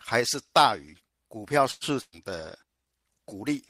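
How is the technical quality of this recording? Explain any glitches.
The recording has four network-related glitches, all from about 1.7 s onward.

Short stall from a late packet, 1.71 to 1.84 s: a packet arrived late, so the receiver held the last sound for 96 ms, then resumed without losing anything.

Burst of packet loss, 2.01 to 2.15 s: lost packets left a gap, filled for 113 ms by continuing and fading the last sound, including 20 ms of silence. About 160 ms of speech is skipped.

Call bitrate drop, from 2.43 s to the end: the estimated bandwidth fell, cutting the encoder from 32 to 17 kbps for the final 1.2 s. The speech sounds coarser and does not recover.

Jitter buffer slow-down, 2.66 to 2.89 s: to rebuild its reserve, the receiver repeated small pieces of audio, adding 62 ms. Speech plays at about 77% speed with unchanged pitch.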